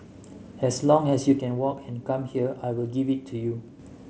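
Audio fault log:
1.39–3.79 s one channel drops out: the speech abruptly falls by about 6 dB and stays lower until 3.79 s, with the light grainy edge of the mSBC headset codec still audible. Likely one stereo channel was lost, halving what reached the mono sum.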